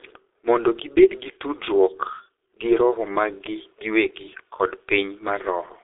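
From start to finish the speech carries G.723.1 codec damage, and it is heavy. Nothing reaches above 3.8 kHz, and the band sits at roughly 200 Hz to 3.7 kHz, so the speech is muffled. Unlike a clean narrowband telephone filter, the low-rate coding smears consonants and adds a hoarse, rough texture, because the slow 30 ms frame updates cannot follow fast articulation. That points to a rate near 6.3 kbit/s.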